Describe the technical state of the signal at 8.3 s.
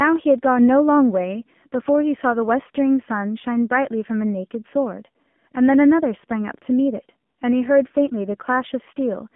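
At 8.3 s the speech carries AMR narrowband mobile codec damage, present across the whole clip. Band-limited to roughly 150 Hz–3.5 kHz and rebuilt from a sparse pulse-driven vocal-tract model, it sounds plainly buzzy and synthetic, which fits a low 7.4 kbps mode.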